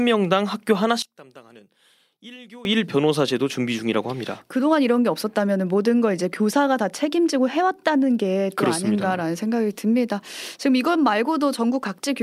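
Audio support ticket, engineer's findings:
1.02–2.65 s: speech drops about 22 dB on mono sum, only a faint residue left. Likely one channel inverted, so shared centre content cancels.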